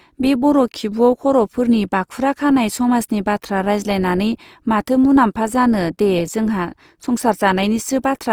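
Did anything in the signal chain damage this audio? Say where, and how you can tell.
Yes, at the codec stage, likely Opus compression running in its CELT music mode. The speech sounds rough and grainy from start to finish, with noise-filled bands instead of holes, and the spectrum still reaches 20.2 kHz. That all points to a bitrate around 24 kbps.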